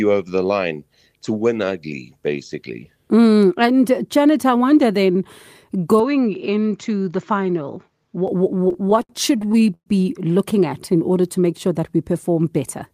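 From 6.0 to 8.28 s the sound abruptly turns duller and about 5 dB quieter, with a faint new noise floor, likely an input switched to a poorer device, with no silence at the switch.

From 8.55 to 9.88 s, just before "looking at in", repeated stalls (stutter) drag the audio, with gaps up to 120 ms stretched over rather than lost, unlike packet loss.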